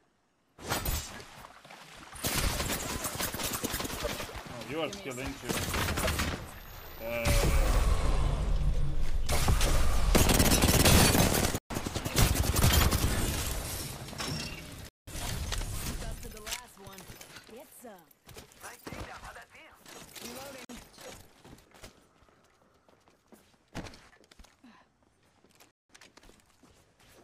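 Abrupt holes at 11.58–11.70 s, 14.89–15.07 s, 20.65–20.69 s and 25.71–25.90 s are blocks of digital silence, where output buffers likely went unfilled and the sound cut straight to silence.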